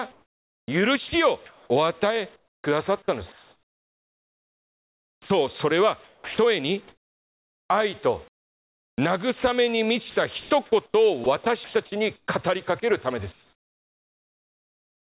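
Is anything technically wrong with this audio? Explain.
Yes. From 0.12 to 8.98 s and again from 10.4 to 12.28 s, the speech sounds choppy, with holes in the sound. This is likely sound chopped by the voice detector, which repeatedly stopped sending, replacing about 5 s and 0.5 s with comfort noise. From 13.32 s to the end, the real background gives way to steady, featureless noise about 12 dB quieter. This is likely comfort noise in place of the background, generated by the receiver while the sender paused transmission. The call path, with nothing above 4 kHz, is working normally.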